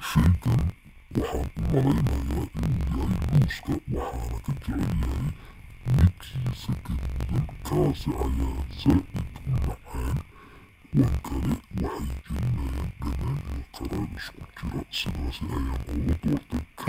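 Interleaved audio read as planar affects the whole of this speech recording: each block of alternating left and right samples, about 21.8 ms long, has been split into halves, with the first half treated as the left channel and the second as the right. Each half plays at half speed, so the pace holds but everything drops an octave, and the block boundaries repeating at about 46 Hz add a steady, choppy buzz.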